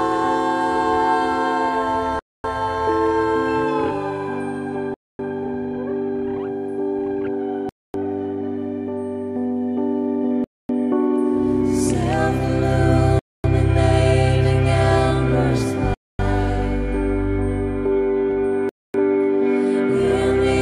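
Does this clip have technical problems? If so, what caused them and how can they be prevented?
Yes: a gap between chunks. The audio arrives in 2.5 s chunks with 250 ms of silence inserted at each join, cutting hard-edged holes at 2.19, 4.94, 7.69, 10.44, 13.19, 15.94 and 18.69 s. Buffering ahead and starting each chunk exactly where the previous one ends prevents this.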